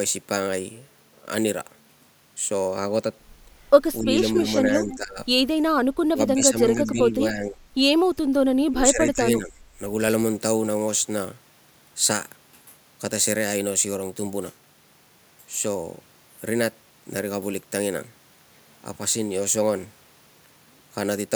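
From 2.68 to 3.68 s the sound turns dull, with a notch near 10 kHz. This is channel delay comb filtering: one channel lags the other by roughly two samples before the mono sum.

The speech level then dips at 4.02 to 4.17 s, 4.4 to 5.19 s, 6.11 to 7.65 s and 8.68 to 9.53 s, by up to about 20 dB. This is likely speech suppressed in double talk, where the echo canceller turns down its own talker along with the loudspeaker echo.

Inside those stretches, faint delayed copies of the voice appear at 4.54 to 4.58 s, 4.91 to 4.97 s and 6.84 to 6.91 s. They trail the voice by 281 ms and sit about 15 to 25 dB below it. These are likely echo leak, loudspeaker pickup the echo canceller failed to remove.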